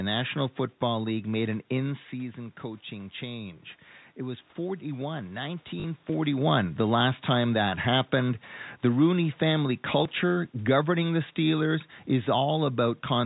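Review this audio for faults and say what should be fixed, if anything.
Packet loss with the last packet repeated shows up from 5.80 to 5.84 s: about 40 ms of audio went missing, and the receiver filled the hole by replaying the previous chunk, which fits two lost 20 ms packets. Because the repeat ignores the pitch cycle, the brief run has a robotic, buzzy stutter at the packet rate. That stutter separates it from a plain dropout, which would be a silent gap instead. The level change just after, near 6 s, is the talker moving, not part of this fault. To prevent it, use a jitter buffer with proper packet loss concealment, or add forward error correction on the link.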